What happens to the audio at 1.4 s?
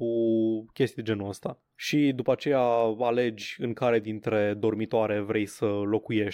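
Nothing goes wrong at 1.4 s: the speech runs on there without any dropout, click, distortion or other audible fault.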